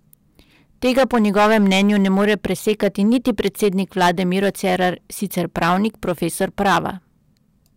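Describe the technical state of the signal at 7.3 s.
At 7.3 s the speech is hard clipped, as it is throughout: driven about 12 dB past full scale, with roughly one sample in twenty sliced flat. Unlike soft saturation's rounded warmth, these abrupt corners spray high harmonics, giving harsh fuzz on loud syllables.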